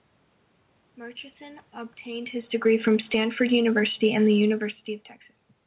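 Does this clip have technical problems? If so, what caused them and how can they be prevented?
Yes. Automatic gain falling occurs from 3.84 to 5.19 s. The gain control judged the input too loud, or its background noise too strong, and lowered its gain gradually, by about 3 dB. The speech and its background sink together. Setting a lower input level keeps the control from backing off.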